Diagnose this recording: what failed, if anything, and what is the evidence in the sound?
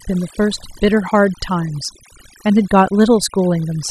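Overdone noise removal runs throughout, in the noise-reduction processing. Between phrases the background drops to near silence dotted with twinkling specks. An over-aggressive suppressor is switching individual frequency bands off near its noise estimate, taking quieter speech components with them.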